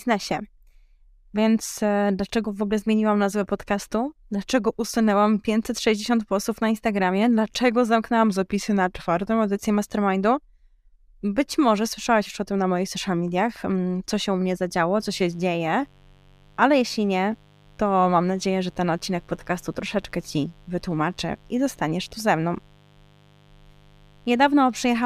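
From 8.3 to 9.55 s the speech abruptly slows by 5.4% and drops almost a full semitone, about 97 cents, then snaps back to normal. This is most likely a drift correction step, where clock-matching software briefly changed the playback rate to rebalance its buffer. Speed and pitch move together and switch in single steps. That sets it apart from tape wow, which glides gradually, and from a pitch shifter, which would leave the timing untouched.

Right after "się u mnie zadziało", at 15.02 s, a mains buzz enters and continues to the end. Its 50 Hz base carries a raspy spread of harmonics reaching into the kilohertz range, roughly 30 dB below the speech. Sharp switching spikes arriving twice per mains cycle make it sound edgy rather than smooth. A plain ground-loop hum would be a soft, rounded low tone without that gritty top end.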